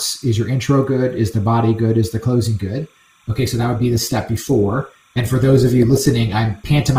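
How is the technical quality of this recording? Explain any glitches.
Two faults are audible, one constant and one from partway through.

Timecode bleed runs throughout. A faint chirping warble alternates near 1 and 2 kHz, around 40 dB below the sound. Linear timecode at 30 frames per second is leaking in from a nearby track or cable.

The adaptive stream switches to a lower bitrate at 2.93 s and stays there to the end. Codec artefacts suddenly rise, with no gap. This fits the player falling back to a lower-bitrate version because the connection slowed, likely from about 64 kbit/s Opus to about 16 kbit/s.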